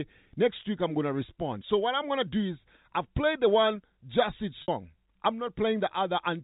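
At 4.62 to 4.68 s, packet loss with pitch repetition leaves a 60 ms gap, consistent with three 20 ms packets. The receiver repeats the last pitch period and fades it out, producing a brief held buzz. A spectrogram shows frozen, flat harmonics, and the waveform shows identical cycles decaying in level.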